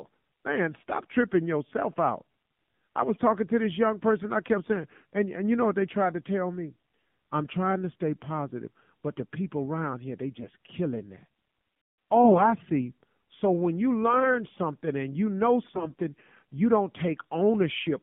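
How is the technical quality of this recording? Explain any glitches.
The recording is a narrowband phone call, with codec damage throughout and five short bursts of corruption.

AMR narrowband mobile codec, throughout: the speech is coded with a vocal-tract model on a band of roughly 150 Hz to 3.5 kHz. The plainly buzzy, synthetic timbre fits a low-rate mode, around 7.4 kbps, and nothing above 4 kHz survives.

AMR bit errors, at 3.01–3.17 s (just before "talking to this young"), 10.40–10.50 s, 12.24–12.54 s, 14.03–14.37 s (after "when you", before "something and you know") and 15.72–16.00 s (after "something and you know", before "you don't"): bits flipped on a weak link, misplacing the excitation pulses. The speech roughly keeps its pitch and level but turns hoarse, scratchy and gargly.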